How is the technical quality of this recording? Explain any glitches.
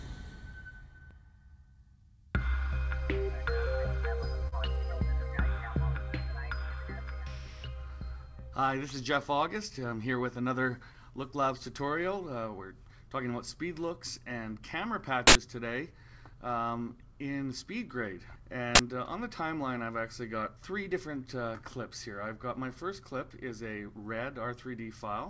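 The recording has four glitches of three kinds. The band stops at 8 kHz, which fits the G.722 codec at 64 kbps.

Short stall from a late packet, 4.48 to 4.54 s. A packet arrived late and the jitter buffer ran dry, so the receiver stretched the last bit of audio for 41 ms until the packet came in. Playback then resumed exactly where it stopped, so nothing is lost. You hear a sound held a moment too long, with a brief buzz or dip. Everything afterward plays 41 ms later than before.

Jitter buffer speed-up, 9.48 to 9.93 s. The buffer had built up more audio than its target, so the receiver trimmed it back by repeatedly cutting out short pieces one or a few pitch periods long. In total it removed about 50 ms. The passage plays at 110% speed with the pitch unchanged and sounds noticeably rushed.

Uninitialised buffer, 15.27 to 15.35 s and 18.75 to 18.79 s. In both places a block of audio was played before anything had been written into it, so whatever data was left in memory came out as sound. 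The first block lasts 80 ms and the second 40 ms. Each one replaces the audio with a loud crack or a burst of digital noise.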